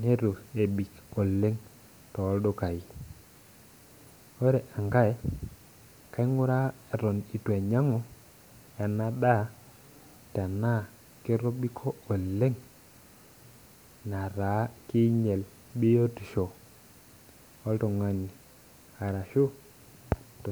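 Nothing in this speech recording stands out as a technical fault at any point, so there's no problem worth pointing to here.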